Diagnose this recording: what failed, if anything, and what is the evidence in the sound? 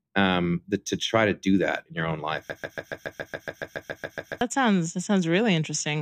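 A broken-record loop runs from 2.50 to 4.41 s, after "that in your own": a 140 ms fragment repeats 14 times back to back, losing the speech until "sounds that". A playback or stream buffer likely stalled, re-sending its last fragment. Waveform and spectrogram show identical 140 ms blocks tiled end to end.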